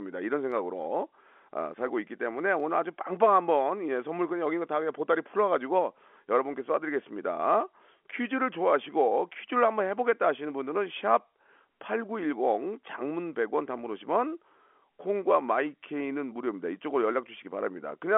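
Nothing stood out on listening to this speech, which sits in the narrow band of a G.711 telephone line, roughly 250 Hz to 3.4 kHz.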